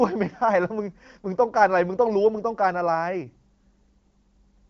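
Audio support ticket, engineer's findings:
No faults found in this speech audio.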